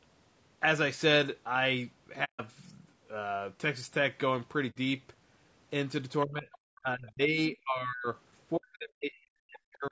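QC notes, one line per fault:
Throughout: low-delay AAC compression. Rough, grainy sound with noise between harmonics, likely from AAC-ELD at a low bitrate, consistent with about 32 kbps.
2.24–2.41 s, 4.70–4.77 s, 8.75–8.94 s: AAC frame loss with muting. Soft-edged holes of 150 ms and 60 ms, then 150 ms scattered across 240 ms, fading out and in where lost frames decode as silence.
6.25–6.49 s, 6.78–8.07 s, 8.57–9.92 s: speech suppressed in double talk. The talker dips by up to about 25, 35 and 40 dB, likely an echo canceller ducking both sides during overlap.
6.52–6.58 s: other side's voice leaking through. A brief second voice about 25 dB below the talker, likely residual loudspeaker echo the canceller missed.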